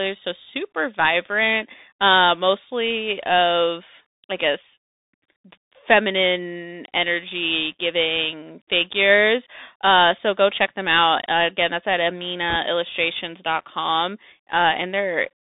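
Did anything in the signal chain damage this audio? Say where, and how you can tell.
Yes. At the codec stage, the Bluetooth CVSD headset codec runs through the whole speech clip. Sound is confined to about 250 Hz to 3.7 kHz, s sounds are scratchy, and a granular hiss sits underneath, which fits a 64 kbit/s one-bit delta stream. Plain telephone band-limiting would be narrow but clean, without that grain.

At the network stage, bit errors on the Bluetooth voice link hit from 12.50 to 12.56 s, right after "again that's at". A brief rushing crackle rides on the speech there, from roughly a one percent error rate, because each wrong bit only nudges the delta step and then decays. A dropped packet would instead leave a gap or a sharp click.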